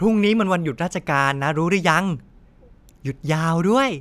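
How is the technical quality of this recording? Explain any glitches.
No glitches can be heard anywhere in the speech. There is nothing in the recording that calls for an explanation.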